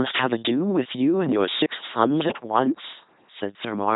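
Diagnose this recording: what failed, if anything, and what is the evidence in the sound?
The failure is at the codec stage: the whole clip has passed through an LPC-10 vocoder, and the damage is heavy. Throughout, the speech has the flat, buzzy, mechanical quality of a synthetic voice, and nothing is present above 3.8 kHz. Each moment is rebuilt from a short all-pole filter driven by either a pulse buzz or noise, never a mix, so natural breathiness and timbre are lost. The sound points to the 2.4 kbit/s LPC-10 rate.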